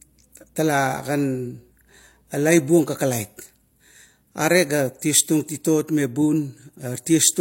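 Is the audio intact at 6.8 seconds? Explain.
No. At 6.8 s, as throughout the clip, the speech carries stacked compression artefacts: a hard ceiling near 16.2 kHz and smeared swirly highs. This is likely transcoding between lossy codecs, consistent with MP3 re-encoded as low-rate HE-AAC. A spectrogram shows a flat cut-off with blotchy high bands.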